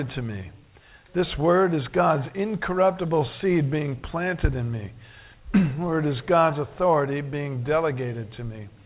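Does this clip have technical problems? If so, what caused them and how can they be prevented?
No, this clip has no technical problems; it simply carries the narrow, telephone-band sound of a call path with nothing above 4 kHz.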